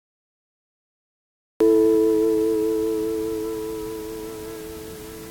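An everyday sound recording with a cut-off start: digital silence runs from 0 to 1.60 s, then the audio enters abruptly mid-sound with no natural attack or fade-in. Capture evidently began late, so the event's onset was never recorded.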